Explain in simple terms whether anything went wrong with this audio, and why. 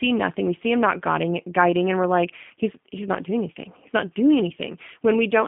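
G.729 codec damage runs through the whole clip. This phone-call codec rebuilds speech from a simplified model of the voice instead of keeping the real sound, so it comes out noticeably rough and synthetic, and everything above 3.5 kHz is missing, making it sound muffled.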